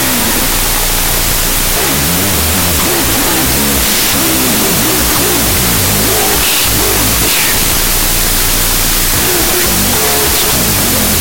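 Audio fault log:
Throughout: wrong sample width. Float samples read as 16-bit integers bury the speech in loud noise, at half speed and lowered pitch.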